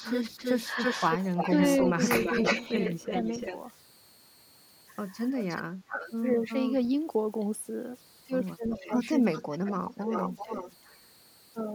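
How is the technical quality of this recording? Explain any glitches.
The recording has three kinds of fault: a faint tone present throughout, repeated echo, and speech that dips out while the echo overlaps it.

Converter idle tones run through the whole clip, at about 31 dB below the speech. A faint whistle sits near 4 kHz. It is clearest in pauses and turns grainy under quiet speech. The likely source is an undithered delta-sigma converter settling into repeating bit patterns at low input levels. On a spectrogram it appears as a thin horizontal line near 4 kHz across the full length, most visible in the gaps between speech.

Echo leak appears three times. From 0.0 to 3.57 s, a copy of the speech returns 335 ms late at about 5 dB below the original. From 5.4 to 6.87 s the delay is 360 ms, and from 8.71 to 10.98 s it is 381 ms, both at about 10 dB down. This is likely a far-end echo canceller passing part of its loudspeaker signal back. 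On a spectrogram, duplicate speech shapes trail each phrase, shifted right by about a third of a second.

Speech suppressed in double talk happens twice. Between 5.3 and 6.0 s the speech drops by roughly 40 dB for about 0.3 s in total, which nearly silences it. Between 8.76 and 10.51 s it falls by roughly 15 dB in pieces adding up to about 0.4 s. Both dips line up with the echo passages, which suggests the echo canceller likely confused the talker with the echo and attenuated both. The waveform shows abrupt notches in the envelope, and the spectrogram shows brief vertical gaps or faded bands.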